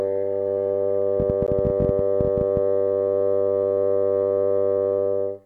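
From 1.2 s to 2.58 s, a train of clicks ticks over the music. Around twenty sharp pops arrive at about 14 per second, unevenly spaced, peaking roughly 10 dB above the music. Interference from nearby equipment is the likely cause.

At 1.47 s, inside that run of clicks, a gap between stream segments cuts the music for 13.8 ms. Two segments' time stamps fail to meet, so silence fills the hole. The edges are hard, and no audio is lost. This fits a 4-second segment length.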